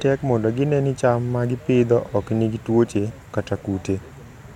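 A speech recording with nothing technically wrong with it.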